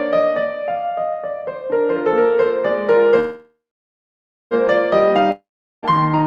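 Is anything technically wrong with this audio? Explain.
Yes. From 3.19 to 4.54 s the music trails into a fading buzz and then about 0.93 s of silence, likely a call audio freeze where delayed packets emptied the jitter buffer. It resumes exactly where it stopped, so nothing is lost, only a 1.3 s delay. From 5.31 to 5.85 s a similar fade into about 0.4 s of silence is likely a long network dropout. Unlike the freeze, the music returns further on, skipping about 0.52 s.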